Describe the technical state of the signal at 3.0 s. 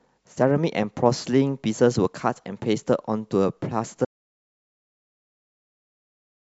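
At 3.0 s the speech signal is intact, with no audible fault at that moment.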